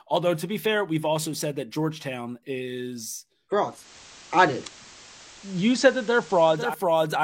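Digital radio blending to analogue runs from 3.60 to 6.81 s in this speech clip: the receiver lost its digital stream and cross-faded over 373 ms to the station's FM broadcast. Hiss rises to roughly 25 dB under the speech, and the level shifts by about 3 dB before it blends back.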